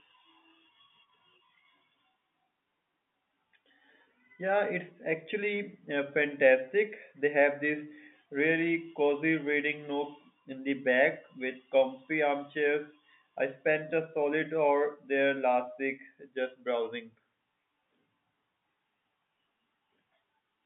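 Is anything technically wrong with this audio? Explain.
No, nothing stood out as technically wrong on listening to this speech clip.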